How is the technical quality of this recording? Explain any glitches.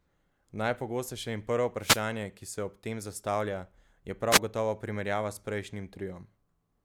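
The speech is marred by two short wireless microphone noise hits, at 1.79 to 2.03 s, after "in prvo", and at 4.31 to 4.39 s, after "ob tem zastavlja je". Each time the FM radio link fades as reflections cancel, receiver noise surges, and you hear a brief swish of static over the voice.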